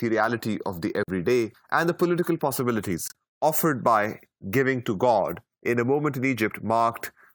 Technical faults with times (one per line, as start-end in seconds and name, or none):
1.03-1.08 corrupt frame muted
3.08-3.12 corrupt frame muted